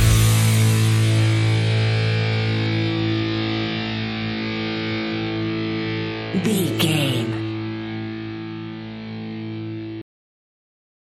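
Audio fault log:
10.02 to 11.07 s, cut-off end: the sound stops abruptly at 10.02 s, mid-event, and the final second is pure digital silence. The last stretch of audio was never written or played out, so nothing reaches the output after that point. Unlike a natural ending or a fade-out, there is no decay, release or room tail. Unlike a mid-clip dropout, the sound never resumes; the silence runs unbroken to the end.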